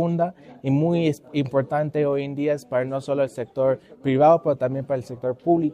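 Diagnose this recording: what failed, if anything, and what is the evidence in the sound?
No fault can be heard.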